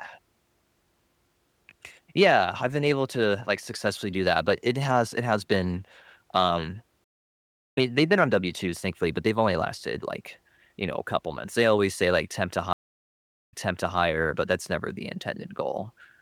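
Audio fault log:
7.04–7.78 s, stream reconnect: the connection dropped and a fresh decoder restarted mid-stream, leaving about 0.7 s of silence before the speech resumes roughly 0.7 s further on, so that stretch is skipped.
12.73–13.99 s, stream reconnect: after another dropout and decoder restart, about 0.77 s of silence, then the server resends buffered audio, so the speech resumes 0.5 s earlier and briefly repeats.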